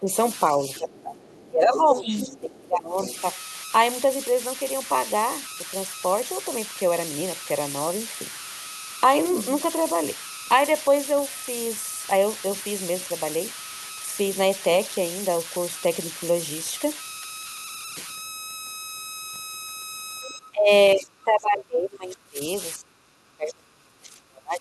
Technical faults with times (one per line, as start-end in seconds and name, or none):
0.00-24.61 converter idle tones
0.00-3.08 speech suppressed in double talk
0.33-2.40 other side's voice leaking through
3.17-3.21 other side's voice leaking through
20.23-24.61 speech suppressed in double talk
20.27-20.34 other side's voice leaking through